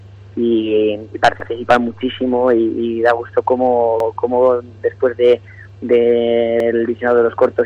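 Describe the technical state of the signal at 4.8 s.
Nothing is wrong with the signal at 4.8 s; the audio there is intact.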